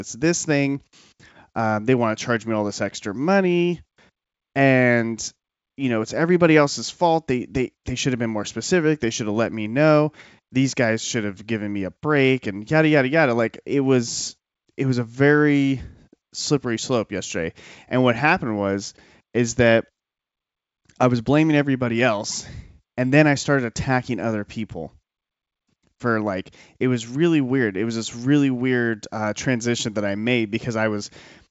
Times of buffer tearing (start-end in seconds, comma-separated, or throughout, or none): none